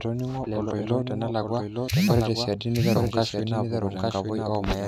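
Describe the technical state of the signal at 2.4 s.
At 2.4 s the speech carries a doubled audio track, present throughout the clip: a second full-band copy trails the original by about a second, around 5 dB quieter, with no decay or room colouring. It is likely a slower capture path or out-of-step edit mixing the same audio in twice.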